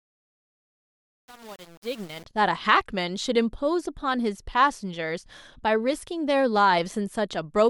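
From 0.0 to 2.25 s, the speech fades in with truncation distortion on the fade. The gain stage driving the fade keeps only about 7 bits and applies no dither, so while the level is low the waveform snaps to a handful of coarse square steps. The rising fade carries grainy, gritty distortion, and it stays rough across the whole fade, clearing once full level arrives at 2.25 s.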